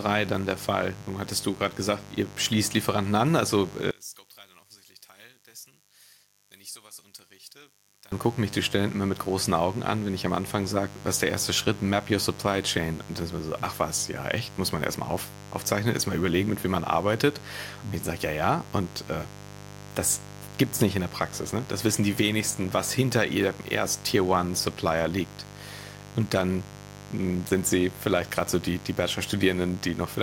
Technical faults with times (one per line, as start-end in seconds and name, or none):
0.00-30.22 mains buzz
3.91-8.12 one channel inverted